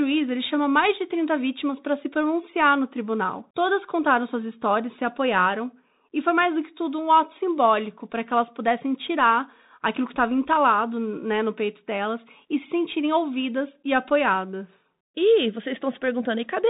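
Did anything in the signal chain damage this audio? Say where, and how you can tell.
Yes, at the codec stage, throughout the speech: the Bluetooth CVSD headset codec. Nothing passes above 3.8 kHz, s sounds turn scratchy, loud bright passages distort, and a granular hiss sits underneath. This fits a 64 kbit/s one-bit up/down stream whose adaptive step cannot keep pace.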